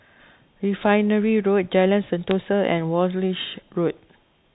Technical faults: bit errors on a digital phone line

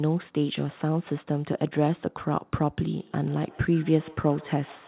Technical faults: feedback echo between two devices

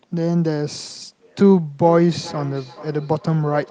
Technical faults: feedback echo between two devices

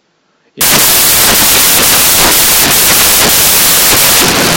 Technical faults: samples built from the wrong bytes

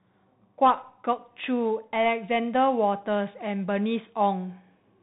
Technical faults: Bluetooth CVSD headset codec

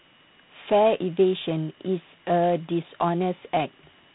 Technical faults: G.726 ADPCM

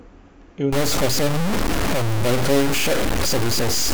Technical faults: low bit depth without dither

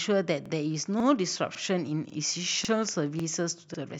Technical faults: overlapping chunks

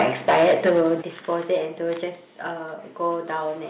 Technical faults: microphone overload; microphone volume stepped down

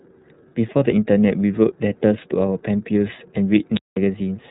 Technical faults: iLBC codec; unstable filter

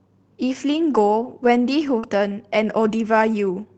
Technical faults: lost packet rebuilt from error correction; short concealed packet loss

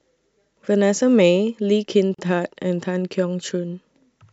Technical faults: gap at a join of encoded pieces

